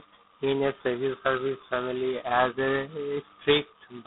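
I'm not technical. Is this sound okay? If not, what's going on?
No. G.726 ADPCM damage runs from start to finish. This telephone codec stores each sample as a tiny guess of its change, here at a very low setting, so the speech carries a harsh, rasping hiss that rises and falls with it, and nothing above 3.9 kHz survives.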